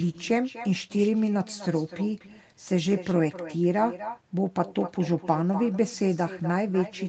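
Speech throughout is shadowed by a quieter, thinner copy of itself, trailing each phrase by roughly a third of a second at about 14 dB below the direct sound. This is echo with no canceller: the far end's loudspeaker is picked up by its microphone, and the speech returns over the network round trip without being removed. The audio also tops out near 8 kHz, as expected from a call codec such as Opus at a modest bitrate.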